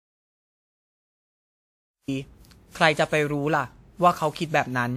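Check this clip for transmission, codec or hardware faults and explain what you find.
Two faults stand out: a stretch of dead silence at the top, and a codec smear that runs through the whole clip.

The audio dropout to silence is already under way when the clip starts and lasts until 2.08 s. It's plain silence with no room tone at all, so the input was likely cut off, by a lost link, an unplugged device or a mute, while the recorder kept writing empty samples. The speech then comes in abruptly mid-flow.

The generation loss runs the full length. The speech has a swirly, hollow, smeared quality with soft, blurred attacks, worse than a single pass at a decent bitrate would give. That points to likely around ten rounds of lossy re-encoding, consistent with WMA-style coding at about 96 kbit/s, each pass adding fresh quantisation noise on a new frame grid. The top end reaches 20.1 kHz, so the damage is in the texture rather than a bandwidth cut.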